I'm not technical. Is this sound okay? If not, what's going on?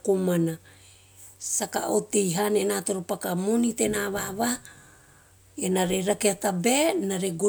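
Yes, no faults to hear.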